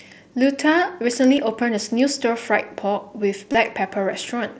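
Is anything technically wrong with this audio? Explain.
Yes, there's concealed Bluetooth headset packet loss in two spots. At 1.37 s a 7.5 ms gap, which fits a single lost packet, gets patched by repeating a closely matching stretch of the preceding waveform, so it's almost invisible. At 3.52 to 3.55 s a longer 22.5 ms gap, which points to about three packets in a row, makes the repetition show as a short buzzy tone at full level, with a slight warble as the real speech resumes. The mSBC wideband path shows up as the usual top end stopping around 8 kHz.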